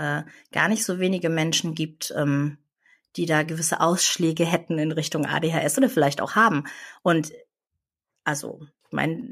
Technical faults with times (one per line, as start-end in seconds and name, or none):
none